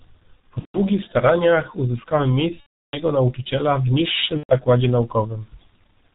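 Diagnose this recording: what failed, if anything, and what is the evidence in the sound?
The speech sounds muffled and hoarse throughout, with nothing above 4 kHz and consonants smeared together. This is a codec-stage failure: heavy G.723.1 codec damage. The dull, rough quality points to a low-rate setting around 6.3 kbit/s. The codec models speech in 30 ms blocks and updates its vocal-tract estimate slowly, so fast articulation gets blurred, and its narrow band strips the high frequencies.

At 0.60 to 0.80 s, 2.60 to 3.02 s, and 4.38 to 4.54 s, the speech stretches into a fading tone, then comes back weak before recovering. This is VoIP packet loss concealed by the speech codec, a network-stage fault with gaps of roughly 150, 330 and 120 ms. The decoder repeated its last pitch and filter, lowering the gain each frame. Because each frame builds on the previous state, the distortion lingers after packets return.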